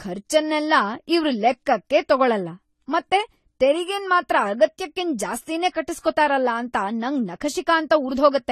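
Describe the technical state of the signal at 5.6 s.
Transcoding between lossy codecs is audible at 5.6 s, as across the whole clip. The speech was likely encoded at a low bitrate, something like AAC-LC, then re-encoded in Vorbis. The second codec spends bits on the first one's artefacts while adding its own, so their different artefacts stack together and nothing remains above 14 kHz.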